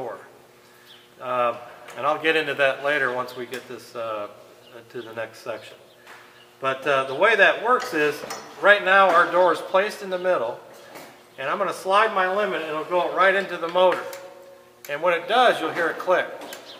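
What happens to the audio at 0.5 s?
Nothing goes wrong at 0.5 s; the audio plays through that moment intact, with no dropout, click, distortion or other fault to be heard.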